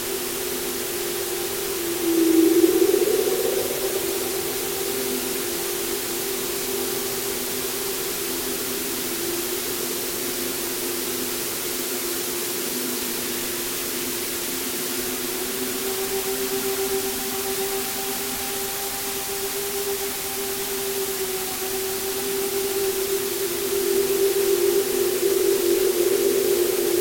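Low bit depth with dither runs throughout: a 4-bit signal with dither added before rounding, leaving a constant, even hiss roughly as loud as the sound itself.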